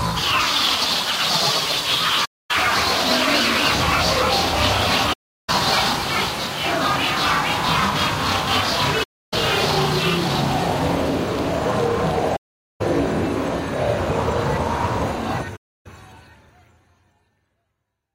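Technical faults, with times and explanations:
2.25–2.51 s, 5.13–5.50 s, 9.03–9.34 s, 12.36–12.82 s and 15.56–15.87 s: AAC frame loss with muting. Runs of frames went missing and the decoder zeroed them, so the sound fades out into roughly quarter- to half-second holes and fades back in, with soft overlapping-window edges.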